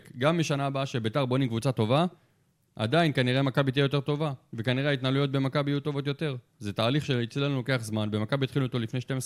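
No technical faults can be heard anywhere in the recording, so there are none to describe in time order.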